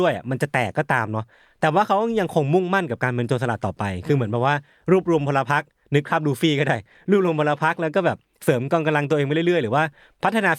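No technical faults can be heard in this speech recording.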